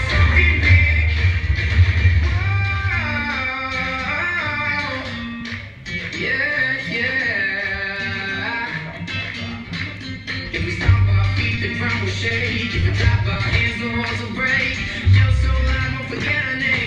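Between 11.09 and 13.37 s you get scattered short gaps: about seven lost or late packets, patched by stretching the last sound, so they come through as quick ticks and smears.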